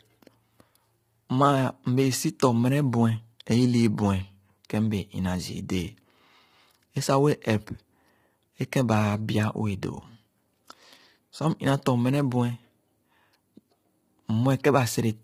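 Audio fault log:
Throughout, low-delay AAC compression: the speech sounds rough and grainy, with noise between the harmonics and a thin, synthetic top band. The likely cause is AAC-ELD coding, whose short frames resolve pitch poorly; the heavy damage fits a bitrate around 24 kbps.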